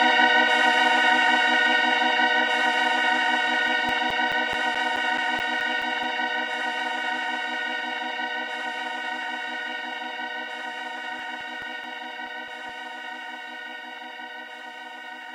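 A recording of sounds with CD scratch ticks in two bursts, 3.68 to 6.03 s and 10.98 to 12.69 s: about five regular clicks a second, each at most roughly 10 ms, where a disc blemish defeats error correction once per revolution.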